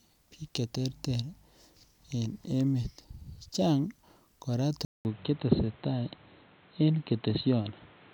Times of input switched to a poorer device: 4.85-8.14

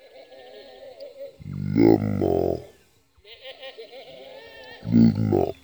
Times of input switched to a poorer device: none

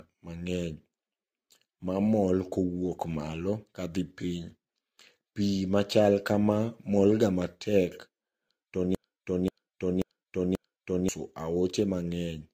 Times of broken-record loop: 8.95-11.09

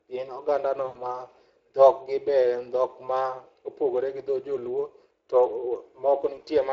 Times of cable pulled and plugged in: none

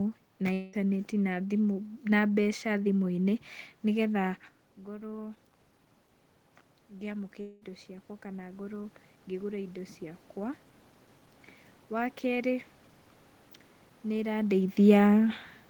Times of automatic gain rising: 6.90-10.30

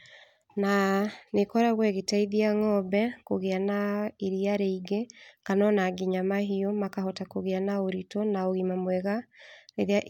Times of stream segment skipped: none

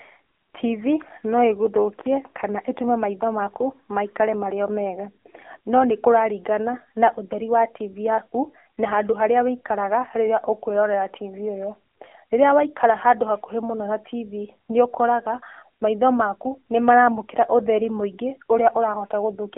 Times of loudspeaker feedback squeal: none

